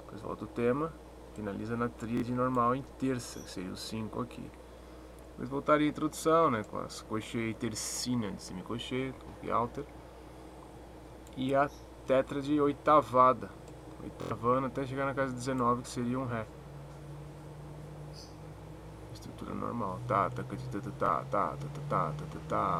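Bluetooth stutter at 2.17–2.22, 9.16–9.18, 14.22–14.31 and 21.06–21.09 s: lost or late packets make a short slice repeat as a buzz. Unlike a silent dropout, the gap is filled, and the sound resumes further on.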